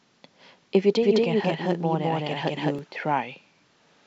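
From 1.03 s to 2.79 s the speech carries a doubled audio track: a second, full-band copy trails the original by roughly a fifth of a second, at about the same level. It has no decay or room colour, so it reads as a hard slapback rather than reverberation, and it starts and stops abruptly at those edges. The likely cause is the same signal reaching the mix twice, through a slower second capture path or an edit holding two offset copies.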